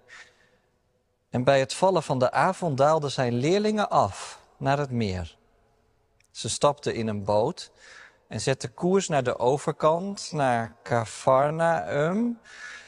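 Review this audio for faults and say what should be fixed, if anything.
From 9.88 s to the end, right after "zetten koers naar de", the speech suddenly slows to about 0.56 times its pace at the same pitch, sounding dragged. This is a time-stretched section, likely from repeating short grains. On a spectrogram, harmonics stretch horizontally and onsets blur. To prevent it, fit the speech to length by editing rather than stretching.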